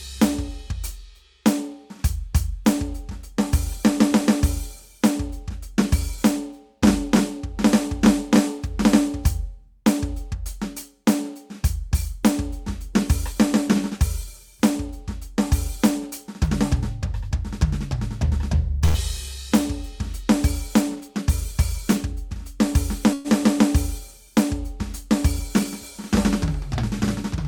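A short stall from a late packet occurs at 18.85 to 18.97 s. One packet missed its slot and the jitter buffer emptied, so the last sound is stretched by 89 ms before the music resumes where it paused. Nothing is lost, but playback now runs 89 ms later, with a brief held, slightly buzzy tone.

A jitter buffer speed-up follows from 20.95 to 22.13 s. With too much audio queued, the receiver repeatedly cut short pitch-period slices, removing about 70 ms. The music plays at 105% speed at an unchanged pitch, so the tempo briefly rushes and loses its steadiness.

A call audio freeze occurs at 23.13 to 23.28 s. For 114 ms the last sound is carried on as a fading buzz, without dropping to silence, and then the music picks up from the same point, now 114 ms further behind. The likely cause is packets held up in transit that left the jitter buffer empty.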